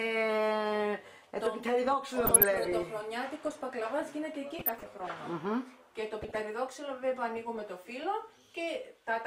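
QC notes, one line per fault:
2.04–2.89 s, 4.59–5.11 s, 6.22–6.35 s: DAB burbling. Weak-reception bit errors, which suggest a bit error rate of roughly 0.4 to 0.5 percent, corrupt MP2 samples and scale factors, so single sub-bands jump in level for up to a frame. The result is short blips of noise in single sub-bands. The spectrogram shows blocky band-limited flares, and the waveform shows small erratic bursts.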